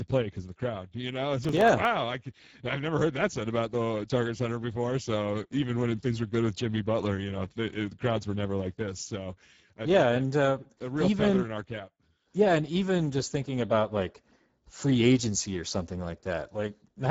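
Speex codec damage runs through the whole speech clip: starved excitation makes the voice hoarse and noisy, nothing exists above 7.7 kHz, and the sound suggests a rate near 10 kbps. Processor overload crackle from 1.44 to 1.85 s comes from a handful of missed, very short buffers, each leaving a hard-edged silent gap that together form gritty tearing.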